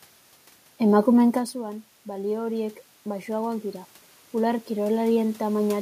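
Automatic gain rising runs from 1.02 s to 5.77 s in this speech recording. The level arriving at the microphone falls by about 16 dB, apparently because the talker moves away at around one and a half seconds. The gain control responds by slowly adding about 10 dB, so the voice and the room noise behind it swell together over several seconds instead of the level being restored at once.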